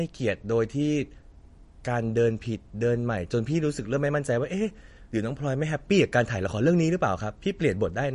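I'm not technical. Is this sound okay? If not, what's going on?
No, not quite. All the way through, the speech has that watery, swirly quality, and the s sounds come out metallic and smeared instead of crisp. That's most likely MP3 compression squeezed too hard. To save space, the encoder threw away everything above about 10.6 kHz, which dulls the sparkle, and dropped quieter details that now flicker in and out, causing that bubbly texture.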